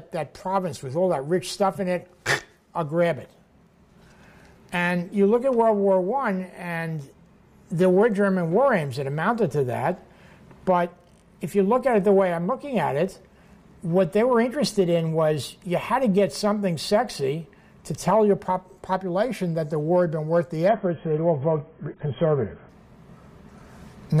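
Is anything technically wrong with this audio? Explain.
Yes. Adaptive stream at a lower bitrate, 20.69 to 22.69 s: a slowed connection forced a much leaner stream, fitting roughly 16 kbit/s, so everything above 3.4 kHz abruptly vanishes, sounding dull and coarse, then recovers without any gap.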